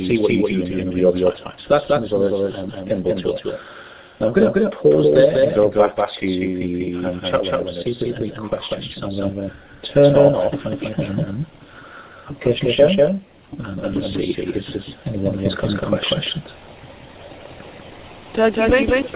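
Throughout the audio, a doubled audio track is audible: a second full-band copy trails the original by roughly a fifth of a second, at about the same level, with no decay or room colouring, so every onset repeats as a hard, flat echo. The cause is likely a second capture through a slower path, or an edit holding two copies out of step. The call path itself passes nothing above 4 kHz, consistent with a narrowband telephone codec.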